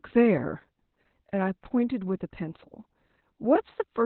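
It's a speech clip with Opus voice compression running the whole way through. Nothing gets past about 4.2 kHz, so it's squeezed into narrowband, and the coarse excitation coding leaves it muffled, hoarse and a bit robotic, which fits SILK working at roughly 8 kbps.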